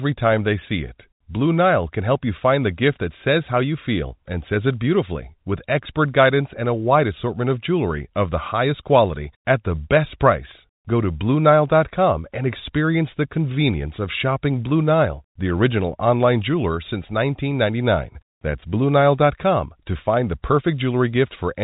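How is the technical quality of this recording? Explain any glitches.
The speech comes over a standard telephone channel consistent with G.711 coding, with nothing above about 3.8 kHz and no glitches or dropouts to explain.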